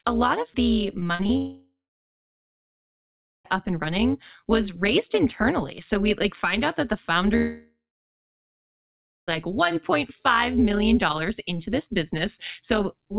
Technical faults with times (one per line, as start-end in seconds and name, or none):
0.00-13.18 overlap-add ripple
1.00-1.31 repeated packet loss (robotic sound)
1.37-3.46 long network dropout
7.36-9.29 long network dropout